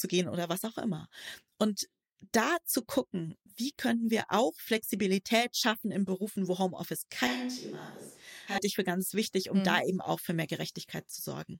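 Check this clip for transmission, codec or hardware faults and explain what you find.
One fault here. From 7.27 to 8.58 s the speech turns suddenly hollow and roomy, about 5 dB quieter and thinner, with more background. That's likely a switch to a distant microphone after the close mic dropped out.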